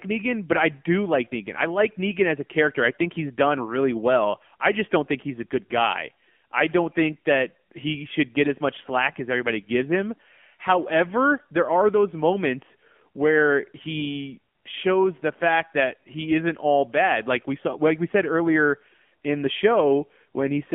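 Throughout, the speech carries AMR narrowband mobile codec damage, likely around 7.4 kbps: buzzy, synthetic tone, and a spectrogram showing nothing above about 3.4 kHz or below 150 Hz.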